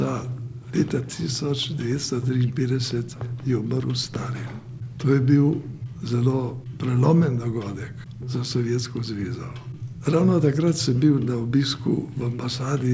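The signal arrives over the call path with no faults, its content ending at about 8 kHz in a way that fits a wideband call codec such as G.722 at 64 kbps.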